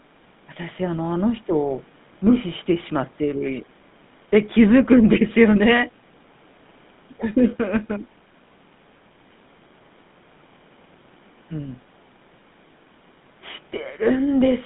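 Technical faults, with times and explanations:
Throughout, GSM full-rate codec: the speech sounds buzzy and gravelly, squeezed into a narrow band from 150 Hz to 3.6 kHz. The coder models the vocal tract and drives it with coarse, regularly spaced pulses, which fits a 13 kbps full-rate stream.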